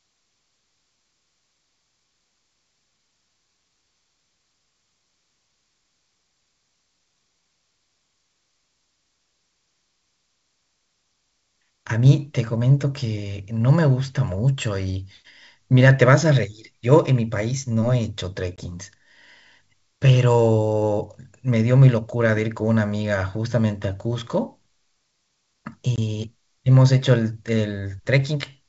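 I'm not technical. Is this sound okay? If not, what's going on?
No. There are two brief dropouts, at about 18.56 seconds and 25.96 seconds. Each is a short, sharp-edged gap, about 20 milliseconds of missing speech, after which the voice comes back slightly distorted before settling. This is packet loss on an ADPCM call: a single packet of the wideband G.722 phone stream went missing, and the decoder briefly lost track of the sender while it caught up.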